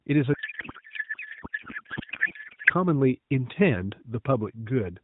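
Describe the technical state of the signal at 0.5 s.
At 0.5 s the signal is inside a codec payload misread running from 0.34 to 2.70 s. Octet-aligned AMR frames are being unpacked as bandwidth-efficient, so every field is read from the wrong bit position, and the speech gives way to garbled noise and warble that barely tracks it.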